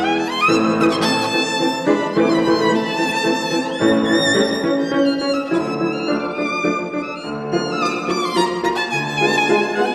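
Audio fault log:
5.75–7.85 s: de-emphasis applied wrongly; a wrongly applied treble cut slopes the top down about 11 dB at 10 kHz, muffling the sound.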